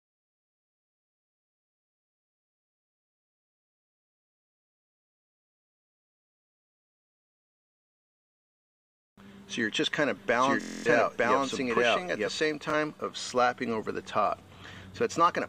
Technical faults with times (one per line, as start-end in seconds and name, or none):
10.16-12.40 doubled audio track
10.61-10.86 Bluetooth stutter
12.70-12.74 Bluetooth stutter